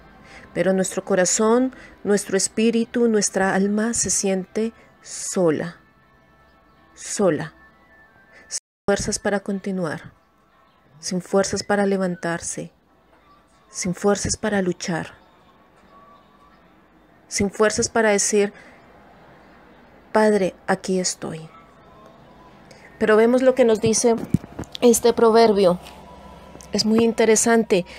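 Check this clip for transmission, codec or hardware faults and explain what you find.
One fault: an audio dropout to silence from 8.58 to 8.88 s, likely a failed input link; unlike a quiet pause, the room tone drops out to silence.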